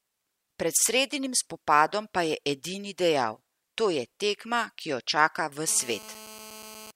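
A speech clip with GSM phone buzz from 5.68 to 6.91 s, starting right after "tekma ki jo čaka": a hard, raspy 217 Hz buzz at about 18 dB below the speech, steady as during a call. Its rasp and pitch, not a mains multiple, set it apart from smooth hum.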